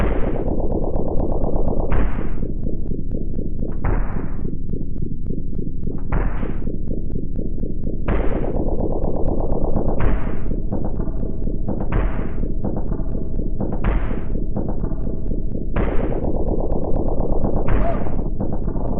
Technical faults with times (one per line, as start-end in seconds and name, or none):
3.80-6.37 section at the wrong speed